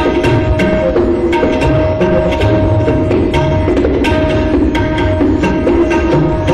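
A DC step occurs at 5.13 s: the waveform's zero line suddenly shifts by about -26 dBFS, and a 20 Hz high-pass then pulls the offset back toward zero. The jump comes through as a single low thump, while the surrounding audio continues unchanged.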